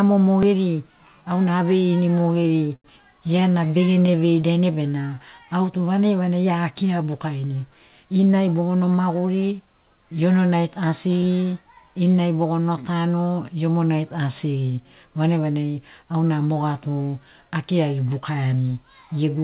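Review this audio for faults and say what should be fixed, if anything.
A small jump in the speech at 0.43 s is a dropped buffer (overrun): the program likely failed to collect its samples before the hardware overwrote them, so roughly 7 ms vanished and the two sides were spliced directly. Give the capture thread higher priority or a larger buffer.

From 2.12 to 4.57 s the speech stutters repeatedly, a case of repeated stalls (stutter). Packets arrived late 37 times, and the receiver stretched the last sound to cover 438 ms in total, up to 87 ms at once, about 18% of that span. Nothing is lost, but the flow drags. Improve network delivery or raise the jitter buffer's headroom.

Between 4.71 and 6.0 s the speech runs slower at unchanged pitch, at 89% speed, a jitter buffer slow-down. The receiver repeated pitch periods and pause fragments to add 150 ms of reserve, giving drawn-out sounds. 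A steadier packet arrival would avoid this.

From 7.89 to 9.60 s the speech runs hurried at 110% speed with pitch intact, a jitter buffer speed-up. Excess buffered audio was trimmed by dropping short pitch-period pieces, about 150 ms overall. Smoother packet delivery, without bursts after delays, prevents it.

The G.711 mu-law call path at 64 kbps leaves nothing above 4 kHz, as expected for that codec.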